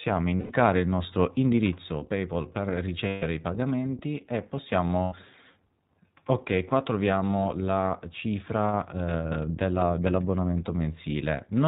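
Speech coded with the iLBC codec sounds band-limited below 4 kHz, slightly rough and synthetic, consistent with its 15.2 kbps, 20 ms frame mode. Unlike predictive codecs, each frame stands alone. Lost iLBC frames cause held, buzzy vowel-like fills at 0.36–0.52 s (140 ms, before "il nostro indirizzo"), 3.08–3.24 s (140 ms, before "i pagamenti e") and 5.02–5.14 s (100 ms, after "i pagamenti e"). Speech recovers almost immediately, with no lingering smear.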